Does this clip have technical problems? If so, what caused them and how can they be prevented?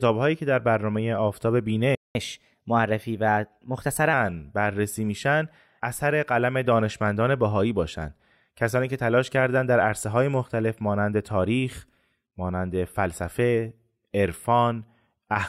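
Yes, two related problems. At 1.95 s the speech drops out completely in mid-flow and stays silent until 2.15 s, a gap of about 0.2 s. That's a playback stall. The likely cause is that the player's buffer ran dry or its audio thread got blocked, so it had nothing to send to the output until it recovered. Giving the player a deeper buffer and keeping its audio thread free of blocking work would prevent this.

From 2.15 s to 4.13 s you get catch-up at higher speed. The player works through the backlog from the stall by resampling it 1.1 times faster, so the speech sounds hurried and sits about a semitone and a half sharp for those two seconds before settling back to normal pace and pitch. If the player has to catch up, a pitch-preserving time-stretch or a gentler speed-up spread over a longer stretch would make the recovery much less noticeable.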